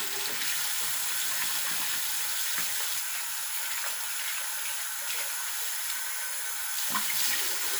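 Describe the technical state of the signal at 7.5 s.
At 7.5 s the signal is intact, with no dropout, distortion or other technical fault to be heard at that moment.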